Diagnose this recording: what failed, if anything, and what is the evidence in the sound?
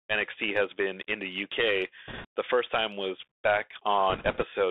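The codec stage is the culprit throughout: the speech sits in a narrow 300 Hz to 3.6 kHz band, with scratchy sibilants, a grainy hiss underneath and distortion on loud bright sounds. That's the Bluetooth CVSD headset codec, whose one-bit delta steps can't keep up, consistent with a 64 kbps link.

On top of that, the radio link drops bits, heard as bursts of rushing, crackly noise from 2.08 to 2.26 s and again from 4.10 to 4.44 s, with no sharp clicks. Each flipped bit only nudges the CVSD step, so errors smear into noise, here at a few percent bit error rate.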